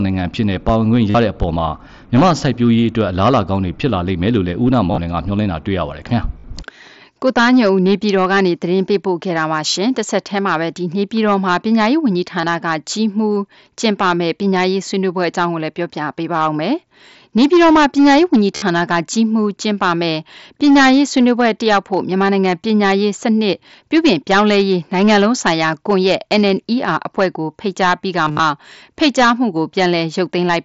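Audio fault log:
throughout: hard clipping. The level is driven about 12 dB past what the chain can pass, so peaks are sliced flat on a few percent of samples. Those squared tops throw harmonics upward, giving a harsh fuzz on every loud syllable, above the light grain of the mSBC headset link.
1.10–1.15, 4.92–4.98, 6.39–6.44, 12.41–12.43, 18.56–18.62, 28.26–28.39: concealed Bluetooth headset packet loss. Losses of 22 to 98 ms, with unbroken runs of up to 60 ms, are filled by repeating the last little stretch of waveform. The result is a brief buzzy hold with a small warble when real speech resumes, longest near 28.3.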